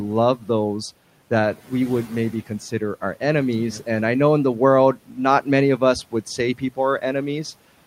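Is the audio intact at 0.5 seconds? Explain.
Yes, the audio is intact at 0.5 seconds, with only the room's own background noise sitting about 25 dB below the speech.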